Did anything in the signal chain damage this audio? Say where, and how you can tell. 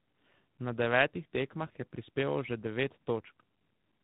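Yes, in the codec stage, and throughout the speech. The sound is rough, muffled and warbly, with nothing above about 3.9 kHz, which is the narrowband ceiling of a telephone link. This is tandem speech coding. The call appears to have been decoded and re-encoded twice by different speech codecs, which fits a low-rate AMR-NB leg feeding an ADPCM coder such as G.726. The second coder had to work on the first one's already degraded output, so the artefacts stack up.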